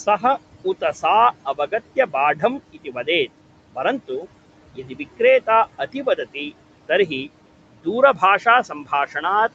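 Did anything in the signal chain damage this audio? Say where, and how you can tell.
Yes. Noise suppressor artifacts run throughout, from the call-processing stage. The room noise, sitting about 18 dB under the speech, is pulled down by about 18 dB between phrases and swells back beneath them, as bands are lowered frame by frame.

Speech cut by the noise suppressor, also in call processing, appears at 1.45–3.08, 3.75–4.25, 4.74–5.48, 5.79–6.36, 6.88–7.29 and 7.84–9.24 s. Within each span, brief quiet speech fragments drop by about 12 to 16 dB and sound swallowed, because the suppressor classed them as noise.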